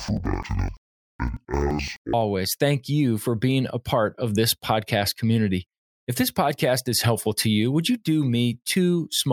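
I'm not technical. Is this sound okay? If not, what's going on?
No. From the start to 2.17 s, just before "thank you for being", there's interleaved audio read as planar. The speech sounds an octave low, doubled and choppy. Each 85 ms chunk, which fits a 4096-sample block, is wrongly split into left and right halves, and both play at half speed.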